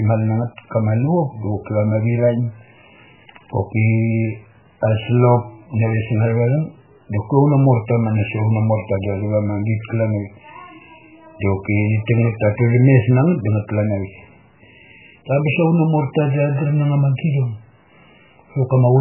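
Across the whole speech recording the sound has a watery, swirling quality, and nothing reaches above 3 kHz, so sibilants and consonant detail are dulled and attacks smear. This is likely MP3 compression, with heavy damage that fits a very low bitrate of around 8 kbps. Starved of bits, the encoder drops weaker frequency lines, which flicker on and off from frame to frame, and it cuts the treble outright at that 3 kHz ceiling.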